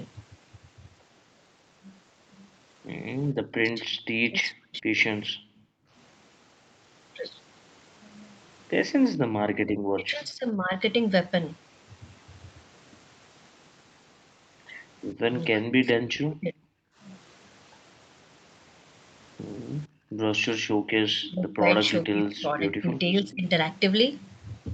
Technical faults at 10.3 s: speech suppressed in double talk

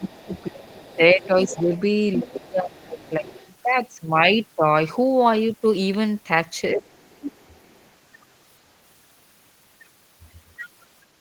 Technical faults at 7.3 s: other side's voice leaking through; speech suppressed in double talk

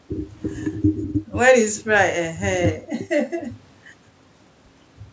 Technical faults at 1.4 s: none

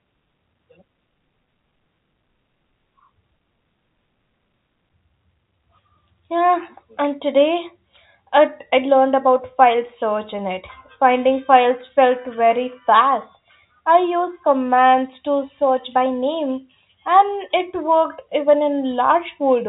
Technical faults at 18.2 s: none

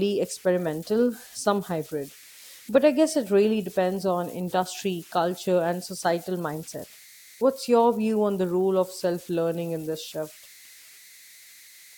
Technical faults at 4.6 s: converter idle tones

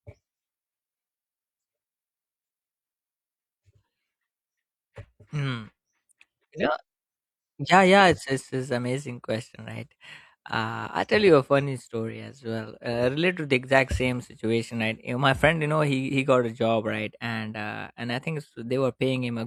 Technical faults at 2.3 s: none

